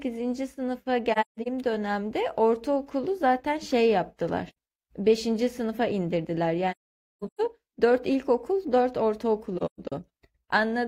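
Speech with AAC frame loss with muting at 1.12–1.48 s, 4.49–4.56 s, 6.71–7.40 s and 9.57–9.92 s. The decoder zeroes the missing frames, so the sound fades into silence and back over roughly a frame's length. The longest gap, near 7 s, is about half a second. The soft-edged holes hold true silence, unlike concealment that repeats or smears the previous sound.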